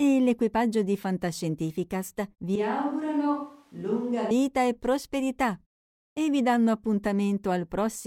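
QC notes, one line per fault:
2.56–4.31 s, switch to a distant microphone: the close microphone's feed likely dropped out, leaving a farther pickup carrying the speech. It turns abruptly roomy and hollow, thinner in the bass, roughly 5 dB quieter with more room noise, then snaps back just before "e prosperità e vi".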